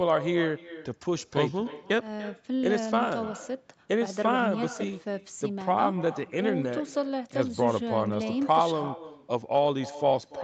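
Right from the start and all the way through, there's echo with no canceller: every phrase of the speech comes back roughly a third of a second later as a fainter, thinner copy, sitting about 15 dB under the direct sound. That's the far end playing the call over a loudspeaker, its microphone picking it back up, and nothing stripping it out before it returns. The top end stops around 8 kHz, which is just the call path's bandwidth.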